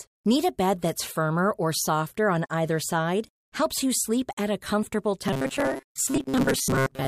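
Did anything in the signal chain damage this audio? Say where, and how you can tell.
Yes. GSM phone buzz, 1.87 to 2.79 s after "bed that's firmer or": analogue wiring rectified a nearby phone's 217 Hz data bursts into an intermittent raspy buzz, about 29 dB below the speech.

Robotic sound from repeated short buffers, 5.28 s to the end after "sleep at a comfortable": a rigid 134 Hz buzz, likely a starved driver buffer repeating about 7.5 ms segments for most of that stretch.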